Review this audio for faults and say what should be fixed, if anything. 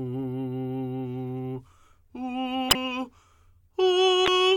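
Two spots of damaged data in the compressed stream in this music, at 2.68 to 2.75 s and again at 4.24 to 4.28 s. Corrupted bytes there trip up the decoder, which loses frame sync and hunts for the next valid header, so each spot comes out as a brief glitch. To prevent it, carry the file or stream over a checksummed transport and verify its integrity before decoding.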